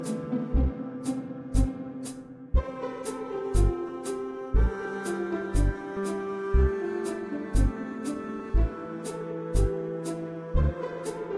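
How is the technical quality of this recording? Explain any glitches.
No technical faults are audible anywhere in the recording, so there are no glitches to explain.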